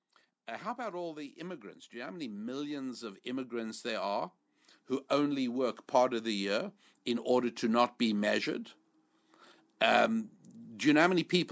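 From 0.1 to 4.31 s the automatic gain control judged the speech too quiet and ramped its gain up by about 8 dB, then did so again from 5.08 to 7.91 s, about 5 dB, just before "be measured". This automatic gain rising makes voice and background swell together gradually.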